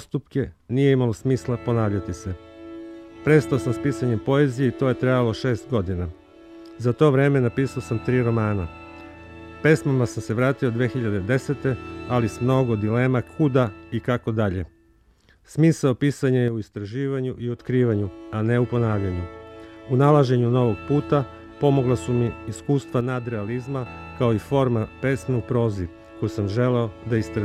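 From 16.48 to 17.59 s, and again from 23.01 to 23.86 s, the level falls abruptly by about 6 dB, then snaps back. The likely cause is one channel drops out: losing one stereo side halves the shared signal in the mono sum.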